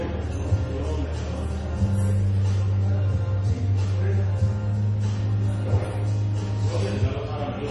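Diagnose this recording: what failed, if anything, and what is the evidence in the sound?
Codec stage, likely heavy MP3 compression: throughout, nothing sounds above 11.5 kHz, and the audio swirls as a bit-starved encoder, fitting roughly 32 kbps, drops weak frequency lines.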